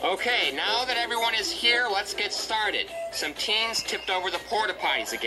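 No technical faults can be heard anywhere in the clip, and the signal holds steady throughout.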